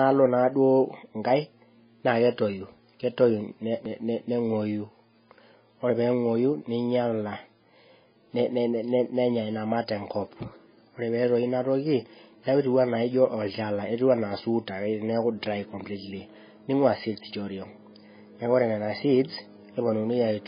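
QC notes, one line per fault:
Throughout, MP3 compression: heavy damage, likely from a very low bitrate; spectrogram shows a hard ceiling near 5 kHz and flickering holes where weak bands drop, giving watery, swirly speech.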